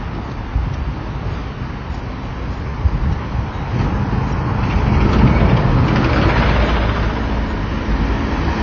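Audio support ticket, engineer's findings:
AAC compression, whole clip: dull, smeared top, nothing above 6.9 kHz, obvious warbly texture. Likely a low-bitrate AAC-LC encoder, which fits around 24 kbps, starving high bands, so the top gets cut off and the remaining bands go coarse.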